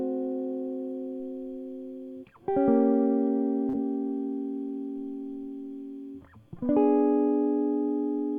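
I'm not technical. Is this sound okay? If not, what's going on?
No. Around 3.69 to 3.75 seconds, about 40 milliseconds of the music arrived too late (short concealed packet loss), so the player patched the gap, causing a brief smear.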